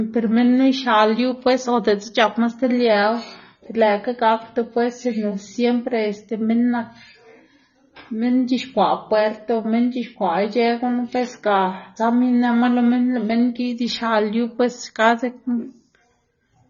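Throughout the speech, the sound is dull, with nothing above 6.9 kHz. Sibilants turn fizzy and sustained sounds warble. This is likely AAC compression. The encoder has cut the top band and quantised the rest coarsely, which fits a bitrate near 24 kbps.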